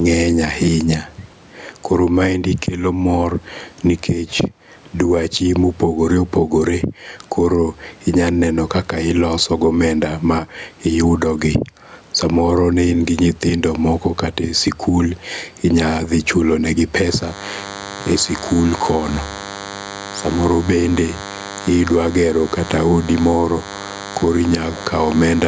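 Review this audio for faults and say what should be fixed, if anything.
Gain pumping runs through the whole clip. The level swings by around 10 dB, and loud and soft passages sit unnaturally close together. This is likely a microphone gain set far too high, with a fast limiter or compressor clamping down on each loud syllable and releasing in the gaps. Prevent it by lowering the input gain so the limiter rarely engages.

DECT cordless phone buzz starts at 17.07 s, right after "inya dhi chulo negi", and continues to the end of the clip. It is a steady, thin buzz at 100 Hz with a dense stack of harmonics, sitting roughly 20 dB below the speech. The 100 Hz rate matches a DECT handset or base station transmitting a radio burst every 10 ms, which the microphone or preamp circuitry rectifies into audio. Prevent it by moving the DECT base and handset well away from the microphone and its cabling, or using shielded cables.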